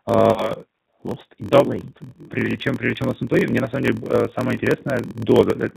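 G.729 codec damage runs through the whole clip. The speech has been squeezed through an 8 kbit/s model of vocal tract filter, pitch predictor and sparse pulses, so nothing above 4 kHz survives and the voice sounds plainly rough and synthetic.

A block size mismatch (padded) is also present from start to finish. Each 1024-sample block read downstream is only partly filled, which fits a writer delivering about 960 samples, and the zero-filled gap repeats at 43.1 Hz as a steady buzz. The audio runs at 0.938 of normal speed while keeping roughly its normal pitch.

VoIP packet loss concealed by the speech codec appears at 0.32 to 0.52 s, where 40 ms of audio went missing, likely two packets. The decoder kept extrapolating its last pitch and filter with falling gain, giving a smeared, fading buzz or coloured noise, and the voice stays weakened after the audio resumes. A shorter 20 ms loss at 4.54 to 4.59 s produces the same brief smear.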